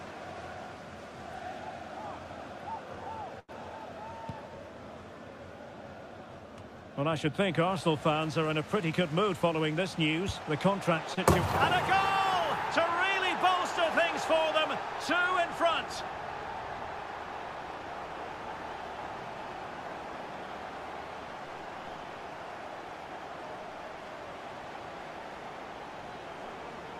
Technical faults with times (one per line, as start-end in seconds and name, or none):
3.39-3.50 short stall from a late packet
8.86-9.51 jitter buffer speed-up
11.14-11.18 short stall from a late packet